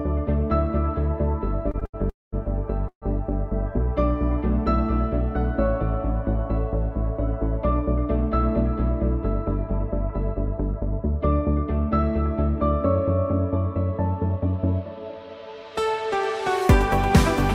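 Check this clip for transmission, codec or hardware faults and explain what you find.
Three kinds of network-timing fault appear, with only short pitch-period pieces cut from the audio itself.

Short stalls from a late packet occur at 1.71–1.76 s, 1.80–1.83 s and 1.85–1.95 s. An empty jitter buffer made the receiver stretch the last sound by 23, 18 and 80 ms. Unlike a freeze, each is a brief held sound, never silence.

Call audio freezes occur at 2.09–2.34 s and 2.88–3.04 s. The sound holds, fades and drops out for about 200 ms and 90 ms, then resumes where it stopped, likely from packets delayed long enough to empty the buffer.

A jitter buffer speed-up runs from 9.23 to 11.16 s. Roughly 70 ms of tiny pitch-period pieces were trimmed, so playback runs 103% fast at unchanged pitch.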